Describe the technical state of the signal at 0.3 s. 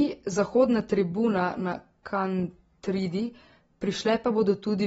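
At 0.3 s the speech carries AAC compression damage, present across the whole clip. Nothing sounds above about 7.7 kHz, and what remains has a dull, smeared quality with a warbling, fizzy edge on sibilants, which points to an AAC-LC encoder at around 24 kbps quantising its frequency lines too coarsely. That is the likely cause. A plain low-pass filter would sound dull but clean. The swirling texture marks it as codec damage.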